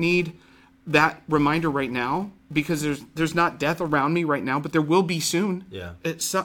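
From the start to about 3.95 s, the speech carries a filter restarted on every block: the filter discards its stored state at each block boundary and begins again from silence, so a small transient appears at every seam. These arrive at 345 Hz, which fits a 128-sample block, and merge into a buzz that rises and falls with the speech level. Mains hum, by contrast, sits steady regardless of level, and random clicks lack this fixed rate.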